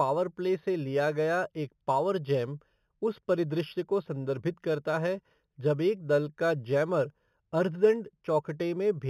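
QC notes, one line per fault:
Throughout: imaging from linear upsampling. The speech has no real content above 4 kHz, which fits material first sampled at 8 kHz and then raised to 44.1 kHz by straight-line interpolation between samples. That crude filter dulls the top of the original band and lets a mirrored copy of the spectrum through, folded into 4 to 8 kHz at roughly 30 dB below the signal, heard as a faint metallic shimmer on sibilants.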